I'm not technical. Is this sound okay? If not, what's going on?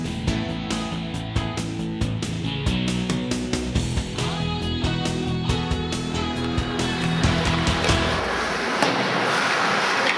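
Yes, nothing here sounds wrong or broken.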